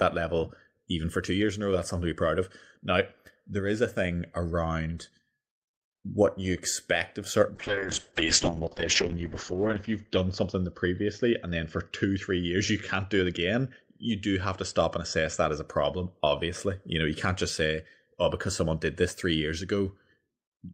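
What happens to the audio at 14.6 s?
A call bitrate drop runs from 7.56 to 15.73 s, after "you expect of certain". The encoder's rate fell to what sounds like about 6 kbps, so the speech turns rough and muffled, with content above 8 kHz cut.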